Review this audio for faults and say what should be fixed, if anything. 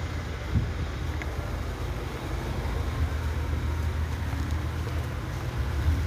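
Sample clock jitter from 1.25 s to the end: the converter's clock wanders by roughly ten microseconds, so samples land at slightly wrong instants, leaving an error around 30 dB below the signal. It is heard as hiss and roughness that swells on loud, bright passages. Use a stable, low-jitter clock source for the converter.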